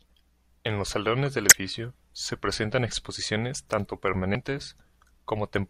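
Damaged data in the compressed stream at 1.49–1.52 s and 4.32–4.35 s: corrupted frames throw the decoder out of sync, producing short glitches in the speech.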